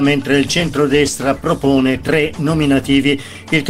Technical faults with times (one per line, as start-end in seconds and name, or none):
0.63-3.69 call bitrate drop